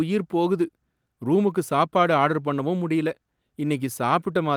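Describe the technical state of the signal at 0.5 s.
At 0.5 s the signal is intact, with no audible technical fault at that point.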